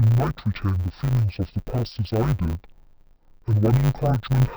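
From start to finish the speech is affected by interleaved audio read as planar. Within each 10 ms block, alternating left-right samples were split so the first half fed one channel and the second half the other, each stretched to half speed. The blocks are short, so there is no clear octave drop. The speech sounds dull and robotic, with a buzz at 100 Hz. On a spectrogram, high frequencies thin out and a 100 Hz comb of harmonics appears. The waveform shows a regular 10 ms segmentation.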